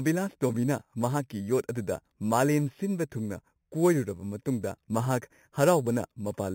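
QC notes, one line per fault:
Throughout: imaging from sample-and-hold upsampling. Mirrored speech fizzes between 4 kHz and 8 kHz, about 19 dB down, which fits repeated samples from an 8 kHz source.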